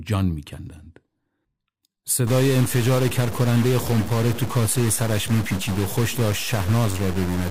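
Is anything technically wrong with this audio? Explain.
Yes. From 2.27 s to the end of the clip there is a stuck bit. One data bit, likely held fixed by a broken line or converter, forces about half of all samples off by that bit's weight, a step of about -25 dBFS. The error follows the waveform, so the speech takes on a harsh, buzzy distortion. Because the bit flips with the sign of small values, the pauses fill with a steady noise that does not drop away.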